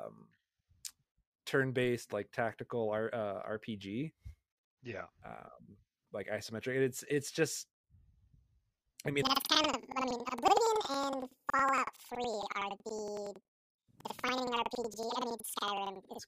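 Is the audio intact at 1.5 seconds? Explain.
Yes, the speech plays through cleanly at 1.5 seconds, with no audible fault at that moment.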